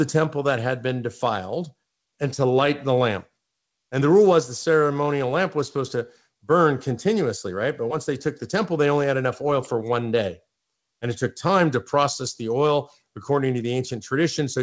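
A speech recording with nothing technically wrong with it, carried over a call link whose wideband coding stops at 8 kHz as expected.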